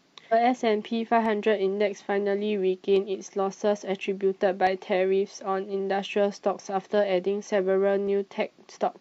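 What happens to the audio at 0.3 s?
Damaged data in a compressed stream, from 0.28 to 0.34 s: corrupted bytes in the encoded speech make the decoder misread those frames and lose sync while it hunts for the next valid frame header, leaving a brief blip in place of the intended sound.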